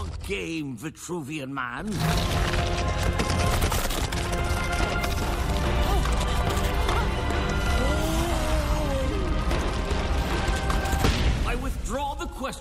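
At 1.05 s and 11.01 s, lost LE Audio frames cause brief noisy smears. The LC3 decoder fills each gap by reusing the previous spectrum with random signs. The first fits one 7.5 ms frame, the second two frames, about 15 ms. Light lossy compression runs throughout.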